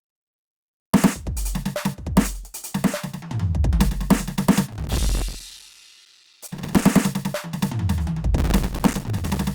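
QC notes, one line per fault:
4.72–6.82 s: processor overload crackle. The music is torn by a dense, gritty crackle for about 2.1 s. Many audio buffers in a row miss their deadline, and each miss drops to silence with hard edges. The very short gaps repeat fast enough to fuse into tearing, which fits a buffer of roughly 3 ms.
8.38–9.44 s: processor overload crackle. The same gritty tearing returns for about 1.1 s and stops once the load eases.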